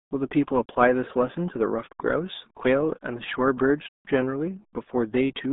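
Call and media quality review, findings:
RealAudio 14.4 codec, throughout. Muffled, gargly speech. Band sits roughly 200 Hz to 3.7 kHz with nothing above 3.8 kHz, so it's a phone-line-narrow top end. Probable component: legacy RealAudio 1 encode in the media path. Heavy coding damage fits an 8 kbit/s stream squeezing speech through a low-order model. Hence the gargle. Worth chasing upstream for a better source.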